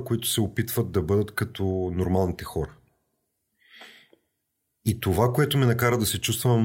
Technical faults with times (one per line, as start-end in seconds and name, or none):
none